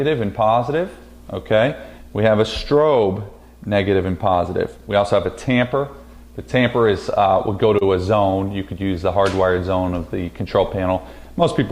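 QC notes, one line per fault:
7.11 to 7.83 s, repeated stalls (stutter): the sound catches four times in under a second, each hitch brief, the longest about 28 ms and roughly 57 ms in all. Packets arrived late or slower than playback consumed them, so the jitter buffer kept draining and the receiver stretched the last bit of sound to cover each wait. Nothing is lost, but about 8 percent of that stretch is filled-in sound, giving a dragging, stammering feel.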